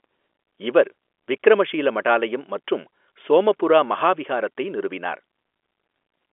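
Nothing stood out as a technical problem on listening to this speech recording, which has the narrow sound of ordinary G.711 telephone coding, with nothing heard above 3.7 kHz.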